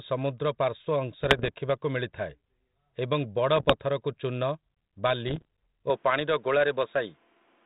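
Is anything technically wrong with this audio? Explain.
Yes. From 1.24 to 1.49 s, 3.56 to 3.74 s and 5.28 to 5.45 s there are pops and rough bursts with brief level jumps: bit errors on an ADPCM link, at a rate of about 0.7 percent. Each flipped bit throws off the decoder's step size and prediction, so the damage rings on briefly.

From 5.9 s to the end, the speech turns dull and boxy, with nothing above 3.8 kHz and new background noise about 35 dB below it. There is no gap and no level change at the switch. This was likely the input being switched to a poorer device with a narrower band.

The light, slightly grainy ADPCM coding that runs throughout is normal and fits a 32 kbit/s G.726 link.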